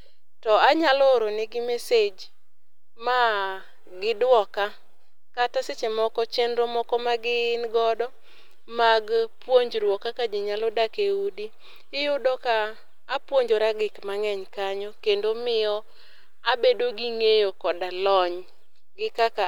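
A DC offset runs through the whole speech clip, from start to finish. The entire waveform sits shifted off zero by a fixed amount, about -36 dBFS. You cannot hear it as a sound in itself. It shows instead as steady energy at 0 Hz, the very bottom of the spectrum. It also eats headroom. One side of the waveform has less room than the other. Peaks on that side have less room before they clip.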